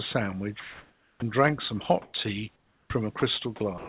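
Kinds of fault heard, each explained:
Comfort noise in place of the background: at 0.6–1.22 s, 2.02–2.14 s and 2.56–2.9 s the room's background turns into steady, featureless hiss, about 1 dB quieter, 7 dB louder and 8 dB quieter respectively, likely from discontinuous transmission.
Onset clipped by the voice detector: at 1.19–1.22 s and 2.88 s speech starts abruptly, 30 ms and 20 ms of its beginning lost, likely because the detector reacted late.
Sound dropped by the voice detector: at 3.2–3.22 s, 3.56–3.6 s and from 3.78 s to the end, speech gives way to steady noise, likely because the detector mistook it for background.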